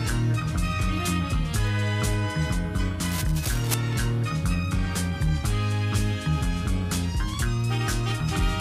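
From 3.05 to 3.74 s the audio carries cable scratch noise, a burst of crackling, rustling grit laid over the sound for roughly 0.7 s and sitting around 10 dB under it. The likely cause is a worn lead, connector or control being moved, its contact resistance jumping about so the signal path flickers. On a spectrogram it shows as a patch of dense, irregular broadband vertical streaks; the waveform gains ragged, spiky bursts riding on the underlying signal.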